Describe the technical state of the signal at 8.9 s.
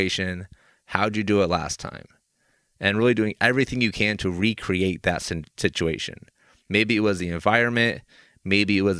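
The signal at 8.9 s is intact, with no audible fault at that moment.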